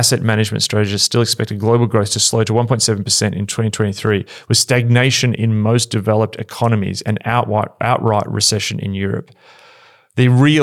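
No technical faults can be heard anywhere in this speech.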